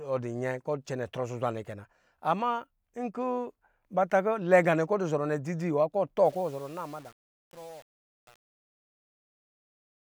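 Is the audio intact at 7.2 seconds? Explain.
No. At 7.2 seconds the speech is inside the fade-out, and from 6.25 s to the end at 10.1 s it carries truncation distortion on a fade. The fade stage keeps only about 7 bits without dither, so as the level drops the waveform collapses into coarse square steps. The tail sounds gritty. A clean fade would thin out smoothly, and the grit tracks the falling level rather than loud peaks, as clipping would.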